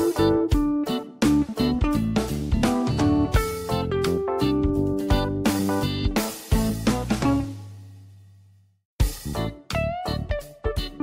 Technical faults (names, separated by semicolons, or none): none